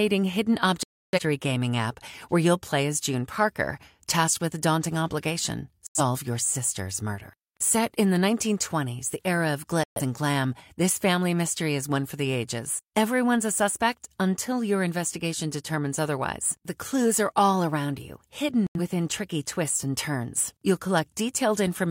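Digital broadcast dropouts mute the speech at 0.83–1.20 s before "gaming app where", at 5.87–6.01 s between "daunting obligation" and "your sister's murder", at 9.84–10.01 s, and at 18.67–18.80 s between "are all around you" and "tricky twists and turns". The receiver lost frames and went silent until valid data returned, so what was sent during each gap is gone.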